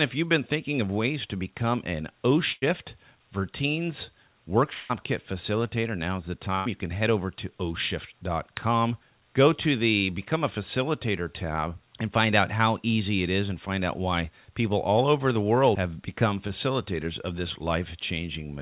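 Speech carried over a call path whose G.711-style coding leaves nothing above 4 kHz, with four breaks. At 2.52 to 2.64 s and again at 6.55 to 6.68 s, the last sound is briefly held and fades before jumping ahead. These are bursts of packet loss, each concealing about 100 ms of missing audio. From 4.74 to 4.91 s a longer smeared, decaying hold replaces roughly 160 ms of audio, never reaching silence, likely a long network dropout that the receiver covered throughout. At 16.48 to 16.51 s there is a quick smear or wobble, a short concealed packet loss filling about 20 ms.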